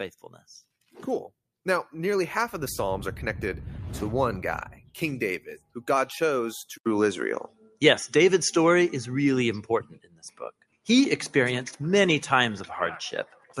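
A speech-style noise suppressor applied to music or sounds runs across the whole clip, treating steady, sustained material as noise. The level swings by roughly 10 dB as it clamps down and lets go, so held parts pump and thin out while sharp onsets slip through.

The sound cut by the noise suppressor gets worst at 0.19–0.45 s (about 14 dB down), 4.67–4.97 s, 5.39–5.84 s, 7.47–7.82 s, 9.84–10.88 s (about 20–21 dB for these four) and 13.26–13.58 s (about 15 dB). Sustains sink and tails get chopped short.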